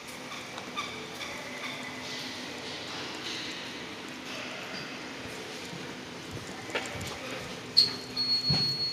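Listening to the recording of everyday sounds, nothing stood out as a technical problem at any point.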